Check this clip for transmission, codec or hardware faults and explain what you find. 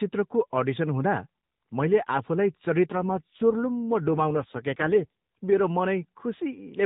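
One fault turns up on what sounds like an AMR-NB narrowband call. Right after "मैले आफूलाई", from 2.92 to 5.13 s, there's an AMR rate drop. The link forced the codec down to a lower rate and spent the freed bits on error protection, so the voice gets rougher and more synthetic. The roughness fits a fall from 12.2 to about 5.9 kbps. There's no gap and no change in bandwidth, and it clears once the rate climbs back.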